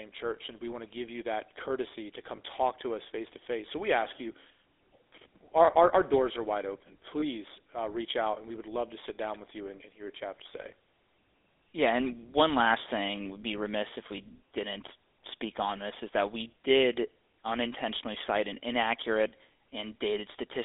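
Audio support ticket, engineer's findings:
GSM full-rate codec, whole clip. Buzzy, gravelly roughness on the speech. Spectrogram: energy confined to roughly 300 Hz–3.6 kHz, nothing above. Pulse-driven vocal-tract model with decimated excitation, consistent with 13 kbps full-rate coding. Plainly audible degradation.

Lost GSM frames, 2.36–2.39 s and 7.20–7.23 s. Brief rough, metallic ring. Last good frame's parameters repeated. Waveform: short smeared segment. Spectrogram: frozen, stretched harmonics over about 20 ms. Duration fits a single lost frame at each point.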